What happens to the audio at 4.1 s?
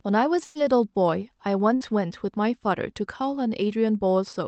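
At 4.1 s the speech is intact, with no dropout, glitch or distortion at that moment.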